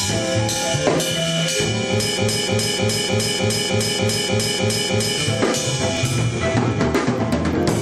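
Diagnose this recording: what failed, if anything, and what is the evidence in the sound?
Broken-record loop, 2.18 to 5.18 s: one 304 ms fragment repeats ten times, likely from a stalled playback buffer re-sending its last chunk. The intended audio is lost.

Overlap between stream segments at 3.99 s and 5.97 s: skips 2 s apart mark segment boundaries where overlapping time stamps trimmed milliseconds, so the waveform jumps.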